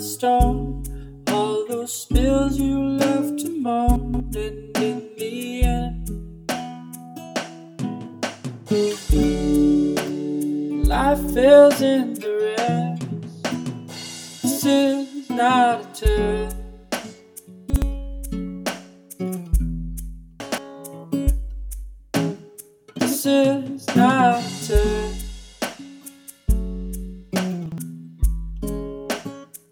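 Chunks out of order occur at 3.96, 17.7, 20.4 and 27.66 s: a 60 ms block plays one to three blocks late, causing jumbled stutters. Waveforms show three abrupt discontinuities per event; spectrograms show vertical broadband lines and misplaced segments.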